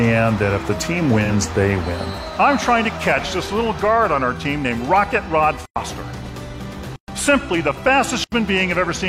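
At 1.24 s there's a brief AAC frame loss with concealment, running to about 1.30 s. The roughly 43 ms patch fits a single dropped frame, and the decoder papered over it from the last good spectrum, so it comes across as a short smeared, noisy blur.

Later you get three blocks of digital silence: 5.66 to 5.76 s (about 105 ms), 6.96 to 7.08 s (120 ms), and 8.24 to 8.32 s (80 ms). The output was simply zeroed, so each one is a hard hole, cutting out and back with no fade.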